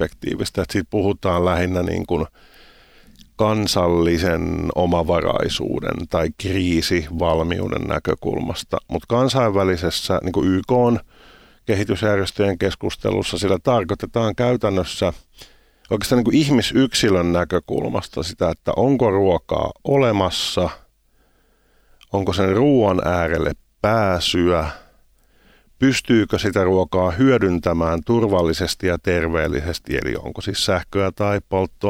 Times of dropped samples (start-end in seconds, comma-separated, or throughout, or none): 16.69